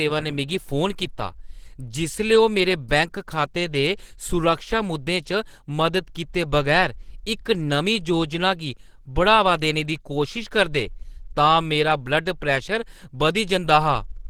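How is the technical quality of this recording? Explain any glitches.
The technical quality is limited by one fault that runs through the whole speech clip. Likely Opus compression at a low bitrate, near 16 kbps, in hybrid speech mode, leaves the voice muffled, hoarse and grainy; a spectrogram shows noise-filled, smeared upper bands.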